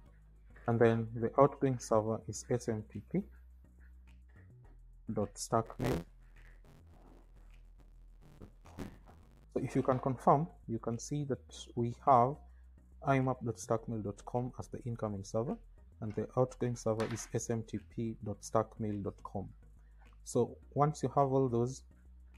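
Buffer tearing runs from 5.65 to 9.45 s, where the audio takes on a robotic, rattling buzz at 86.1 Hz. The program filling the playback ring buffer and the hardware draining it have drifted out of step, so their positions cross partway through each period. Roughly half of every buffer replays audio from about 20 ms earlier, with hard splices at both ends. The buzz rate fits a 512-sample buffer.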